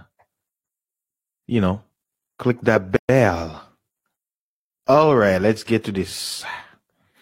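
A speech recording with a gap at a join of encoded pieces. Sound drops out from 2.96 to 3.09 s, about 126 ms of silence. The edges are smeared by the codec. Separately encoded pieces were joined untrimmed, leaving encoder delay and end padding in place.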